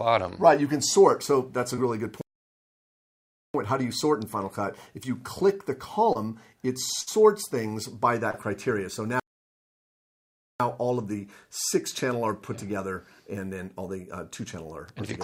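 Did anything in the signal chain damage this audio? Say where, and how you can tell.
Yes. Brief smears or wobbles at 1.75 s, 6.13 s and 8.31 s are short concealed packet loss on the network path. Each time about 20 ms of audio, consistent with one lost packet, never arrived, and the decoder papered over the hole by extending the preceding sound before blending back.

The sound stops dead from 2.21 to 3.54 s and again from 9.20 to 10.60 s, about 1.3 and 1.4 s of silence, then carries on. These are playback stalls, likely caused by the player's buffer running dry or its thread being blocked, so output halted until data flowed again.

At 7.01 to 7.09 s the sound turns into a held buzz or fading hiss, then resumes slightly further on. This burst of packet loss dropped about 60 ms, several packets' worth. The receiver stretched and faded the last sound across the gap, and that stretch of audio is simply gone.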